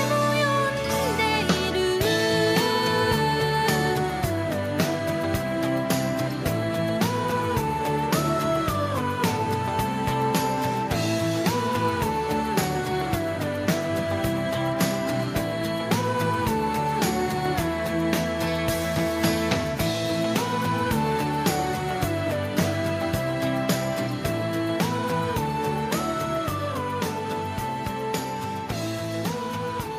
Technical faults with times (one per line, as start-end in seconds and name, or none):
none